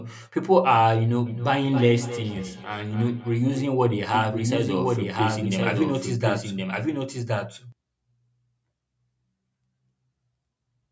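From 1.26 to 3.85 s, each phrase comes round again at roughly a third of a second, thinner and more ringing each pass, peaking about 13 dB below the speech. This is feedback echo between two devices: one plays the other's microphone feed back into that microphone, beyond its echo canceller's reach.

From 4.14 to 7.72 s a second full-band copy of the speech trails about a second behind, only a few dB quieter, with no decay or room colour, and starting and stopping abruptly. This doubled audio track is likely a second, slower capture path mixed in.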